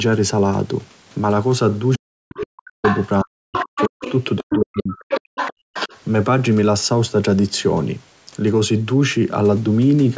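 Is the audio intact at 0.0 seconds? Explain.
Yes, the audio is intact at 0.0 seconds, with no fault at that moment.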